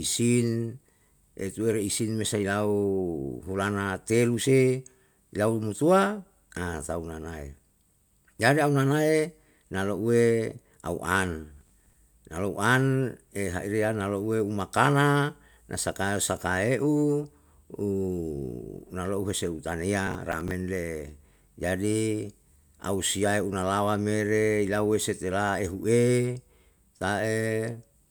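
At 11.57 to 11.93 s, just before "na lou an ehaire", and again at 20.07 to 20.51 s, processor overload crackle tears through the speech: several missed deadlines in a row, each replaying stale audio from buffers of around 10 ms, heard as gritty crackle. Spectrograms show broadband vertical streaks; waveforms show hard-edged repeated chunks.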